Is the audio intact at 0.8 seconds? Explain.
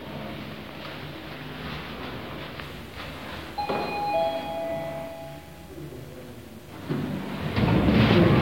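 Yes, at 0.8 s the audio plays through cleanly with no dropout, click, distortion or other fault.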